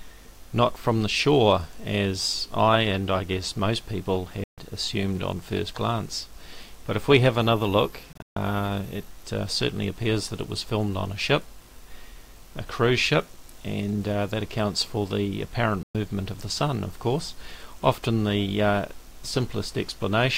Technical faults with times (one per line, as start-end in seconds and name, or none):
4.44-4.58 Bluetooth dropout
8.13-8.36 Bluetooth dropout
15.83-15.95 Bluetooth dropout